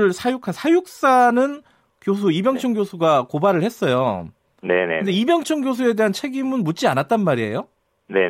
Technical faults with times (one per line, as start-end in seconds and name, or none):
none